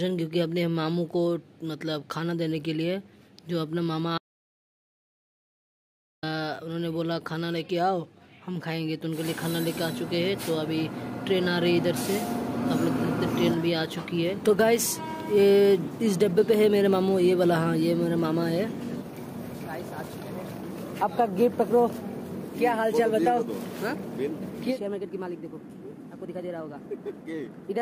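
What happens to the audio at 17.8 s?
Nothing goes wrong at 17.8 s; the audio runs through that moment intact, with no dropout, click, distortion or other fault.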